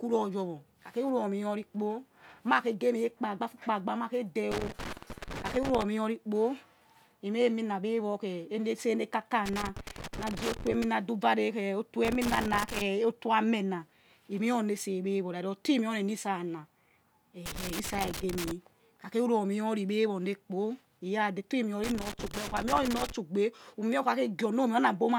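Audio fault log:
4.51–23.12 s, loose connector crackle: five irregular bursts of scratchy crackle break into the speech at 4.51–5.83, 9.46–10.84 (between "ne kaka" and "na du va"), 12.05–12.82 (just before "oto amena he̱ mee"), 17.46–18.51 (just before "kha kha") and 21.84–23.12 s, each lasting about 0.8 to 1.4 s. A worn or dirty contact is rapidly making and breaking as it shifts, chopping the signal on and off, and any DC on the line jumps at each break, adding pops.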